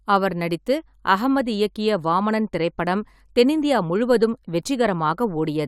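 No technical faults can be heard anywhere in this speech recording. Nothing in it breaks, stalls or changes character at any point.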